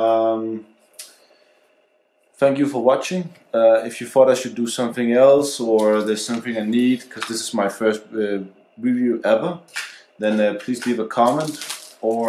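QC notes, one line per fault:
Nothing stood out on listening.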